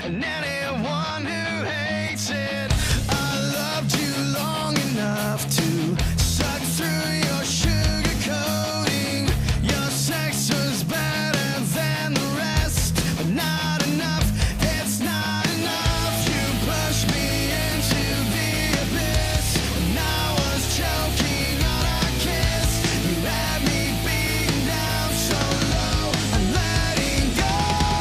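No technical faults can be heard anywhere in the audio. Nothing in the recording calls for further comment.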